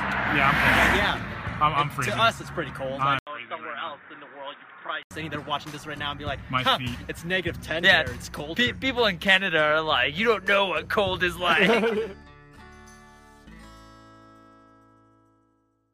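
The audio has one fault: from 3.19 s to 5.11 s it turns dull and boxy, with nothing above 3.8 kHz, a level drop of around 5 dB, and a new background noise floor roughly 30 dB below the signal. An 80 ms silence marks the changeover. This is likely an input switched to a poorer device mid-recording, such as another microphone or a headset call profile, whose narrower band and different noise persist until the original input returns at 5.11 s.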